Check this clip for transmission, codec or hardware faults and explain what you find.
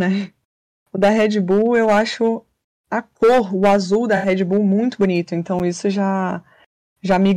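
Two faults are audible in this speech clip. At 4.16 to 4.27 s, after "cor o azul da", there is a corrupt frame concealed. The decoder caught damaged AAC data and covered it. The damaged stretch spans about three frames. At 5.59 s, after "muito bonito", a block of digital silence cuts in. About 8.7 ms of samples became zeros with no fade. Being under about 15 ms, it is heard as a tick or dip rather than as silence.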